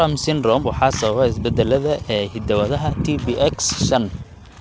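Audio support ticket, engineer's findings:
Clock drift between sender and receiver, throughout: the sender's clock runs roughly 3% slow, so the jitter buffer keeps draining. Audio passes through the G.722 path, which itself carries nothing above 8 kHz.

Repeated timing corrections, 0.10 s to 4.61 s: the receiver repeatedly stretches short pieces to cover the slow sender, playing at 97% speed and adding about 150 ms in total. These edits are small and unevenly spaced.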